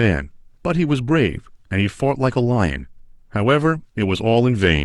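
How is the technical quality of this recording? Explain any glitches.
No glitches or technical faults can be heard here.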